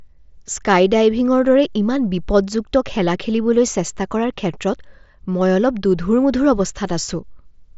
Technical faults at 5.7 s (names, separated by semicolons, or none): none